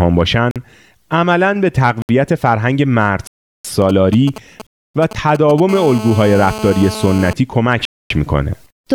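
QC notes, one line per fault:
0.51–0.56 s, 2.02–2.09 s, 3.27–3.65 s, 4.67–4.95 s, 7.85–8.10 s: block of digital silence. The speech drops to silence and returns with no fade. The gaps are 46, 69, 372, 279 and 251 ms long. The short gaps are heard as brief holes, the long ones as longer holes. The 372 ms gap fits a 16384-sample buffer that was not filled in time.
3.82–5.60 s: GSM signalling bursts. A nearby 2G phone sends short groups of radio bursts while it signals. The audio circuit rectifies them into a galloping dit-dit-dit of brief 217 Hz buzzes, around 15 dB below the speech.
5.69–7.33 s: GSM phone buzz. A nearby 2G phone is in a call and transmits steadily at 217 bursts per second. Rectification turns this into a hard, raspy 217 Hz buzz with many harmonics. It is about 12 dB below the speech.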